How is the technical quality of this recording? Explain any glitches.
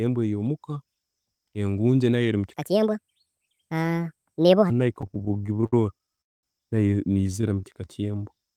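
The recording has several clear transport and playback faults in the speech, mostly in its second half.

From 2.54 to 4.70 s there is a section at the wrong speed. It plays about 1.55 times too fast, so the pitch rises roughly seven semitones and the speech sounds hurried and chipmunk-like. This is likely caused by that stretch being resampled against the wrong clock rate.

Repeated stalls (stutter) run from 4.93 to 6.18 s, with 22 short gaps filling 278 ms, the longest 63 ms. A shorter burst runs from 7.18 to 7.44 s, with five gaps totalling 58 ms. The jitter buffer kept emptying, and the receiver extended the last sound each time, so the speech drags and catches without losing content.

A call audio freeze lasts from 6.21 to 6.44 s, adding about 0.22 s that is almost entirely silent. Speech then resumes exactly where it stopped. This is likely a burst of delayed packets that drained the jitter buffer completely.

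A jitter buffer slow-down covers 7.48 to 8.57 s. The receiver repeated pitch periods to rebuild its reserve, adding 131 ms and playing that stretch at about 89% speed. Pitch is unchanged, but the syllables sound drawn out.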